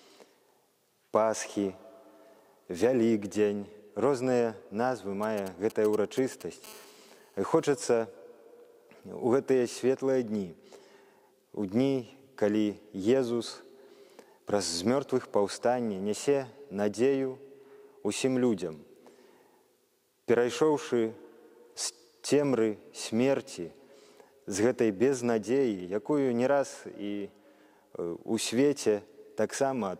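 A nearby 2G handset begins exchanging short groups of control bursts with its network from 5.23 to 6.66 s, and the audio circuitry rectifies that radio energy into the signal path. These are GSM signalling bursts: each group carries the 216.7 Hz TDMA burst rate, so the result is a galloping dit-dit-dit of brief 217 Hz buzzes. It sits around 20 dB below the wanted audio.

From 6.67 to 7.69 s the same handset switches to continuous call transmission, pulsing 217 times a second without pause, and the rectified envelope becomes a steady interference tone. This GSM phone buzz is a hard, raspy 217 Hz drone dense with harmonics and unrelated to the programme material. At about 28 dB below the signal it is quieter than the preceding bursts but persists unbroken for the full second.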